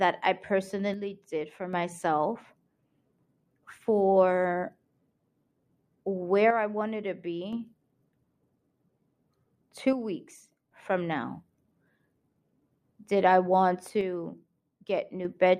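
One channel drops out at 0.94–1.73 s, 6.51–7.53 s, 9.93–10.71 s and 14.01–15.25 s (just after "I want"): the speech abruptly falls about 6 dB, likely from losing one stereo side before the mono sum.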